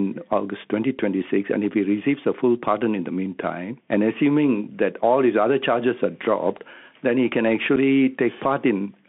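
Throughout, the speech carries the Bluetooth CVSD headset codec: one-bit delta coding, fitting a 64 kbps headset link, confines it to roughly 200 Hz to 3.5 kHz. A granular hiss sits underneath, s sounds turn scratchy and loud bright moments distort as the adaptive step lags. That grainy slope-overload roughness, rather than smeared or warbling artefacts, separates it from ordinary narrowband telephone coding.

At 7.76 s there is unconcealed Bluetooth headset packet loss. About 7.5 ms of audio, a couple of headset packets, drops out with hard edges, and the speech returns briefly quieter. Nothing fills the gap, unlike concealed loss that would smooth it over.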